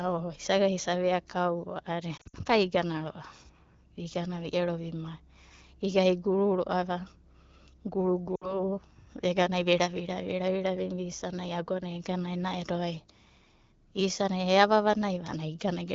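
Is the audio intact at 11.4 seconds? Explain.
Yes, at 11.4 seconds the speech comes through intact, carried by the AMR wideband (HD Voice) codec at 12.65 kbit/s, with no dropout, glitch or other fault at that moment.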